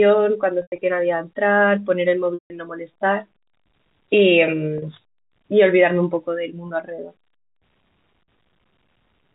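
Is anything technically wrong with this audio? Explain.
Yes. The speech briefly turns into a held, buzzy tone at 0.62–0.78 s, 2.34–2.50 s, 4.78–4.82 s, 6.68–6.70 s and 8.24–8.28 s. This is packet loss with pitch repetition: the receiver repeats the last pitch period over each gap and fades it out. The longest dropouts are 160 ms at 2.34 s and 120 ms scattered across 160 ms at 0.62 s, and they fade toward silence. The gap sizes fit 20 ms packets. The G.711 telephone band is audible throughout.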